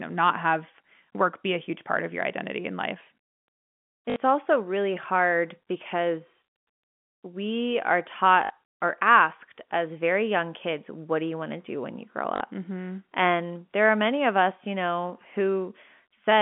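Speech sent over a telephone link loses packets three times, and each gap is filled by packet loss with the last packet repeated: at 4.10 s, just before "also really hard because", 60 ms is patched; at 8.44 s, between "we are" and "or asked as very", another 60 ms; at 12.36 s, after "do when you grow", 40 ms. The repeated chunks, which fit 20 ms packets, recur at the packet rate, so each patch buzzes briefly at 50 Hz as a robotic stutter. The G.711 narrowband line carries the sound between about 150 Hz and 3.5 kHz.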